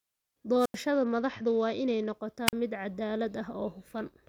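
A speech clip with two brief holes: at 0.58 s hiss swells and the sound cuts to near silence for about 87 ms before returning by 0.78 s, and at 2.46 s a shorter gap of about 43 ms closes by 2.53 s. These are wireless microphone squelch dropouts, where the FM radio signal faded far enough that the receiver's squelch muted its output. Between 0.93 and 2.13 s the treble goes dull and a gritty noise rises, then clears. This is a Bluetooth SBC bit pool drop: the sound points to the link falling from a bit pool near 28 to about 9, roughly 78 kbps, starving the upper sub-bands and coarsening the rest.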